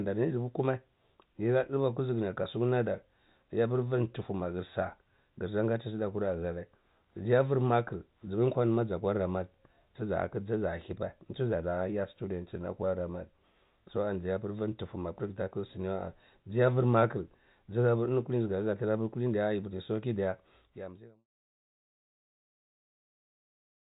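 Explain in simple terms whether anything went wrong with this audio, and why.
Nothing went wrong with this audio, so there is nothing to explain.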